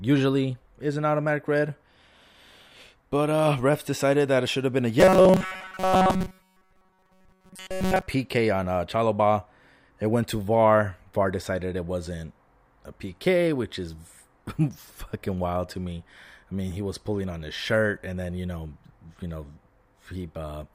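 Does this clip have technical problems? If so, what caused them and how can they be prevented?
Yes. Between 5.00 and 8.06 s there is robotic sound from repeated short buffers. The likely cause is that fresh audio reached the playback software too slowly, so it kept looping the last short block, about 5.3 ms long, and skipped the real audio it had missed. That looping locks the sound to a steady 188 Hz buzz. For most of that stretch, the speech turns into a stiff, metallic drone that only loosely follows the words. A larger buffer or steadier delivery of audio to the playback stage would keep blocks from arriving late and prevent this.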